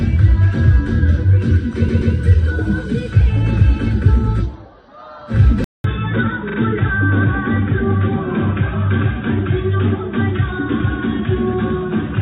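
The audio has two stutters from repeated frames. At 1.88 s a 128 ms block of compressed audio plays twice more, through 2.13 s, adding 256 ms. At 6.48 s a 42.7 ms block plays twice more, through 6.57 s, adding 85.3 ms. In both cases the decoder received the same stretch of the stream again and replayed it, so the same fraction of a second is heard in succession and the clip runs longer by that amount. From 5.64 s to the end the character changes abruptly. After a 200 ms gap the band is cut off above 3.8 kHz, the level sits around 5 dB lower, and a new noise floor appears roughly 35 dB below the signal. This is likely an input switched to a poorer device, either another microphone or a headset's call profile, whose narrower bandwidth, lower gain and own background noise replace the original path. The second stutter falls within this degraded section.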